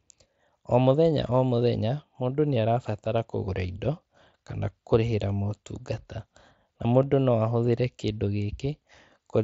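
Concealed Bluetooth headset packet loss occurs twice, at 1.50 s and 7.02 s, each a single 7.5 ms gap. A voice packet from the headset never arrived, and the receiver filled the hole by repeating a closely matching slice of the preceding waveform, leaving only a faint blip in the speech.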